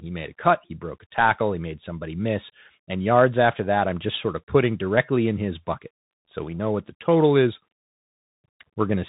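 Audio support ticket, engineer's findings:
Bluetooth CVSD headset codec, whole clip. Speech band-limited, nothing above about 3.8 kHz; granular hiss under speech, scratchy s sounds, loud bright peaks distorting. Damage plainly audible.

Mechanism: one-bit delta coding, step size adapting; fast high-level rises outrun the step. Consistent with a 64 kbps headset link.

Distinct from mSBC wideband (top near 8 kHz) and plain telephone filtering (clean band edge, no slope-overload grit or hiss).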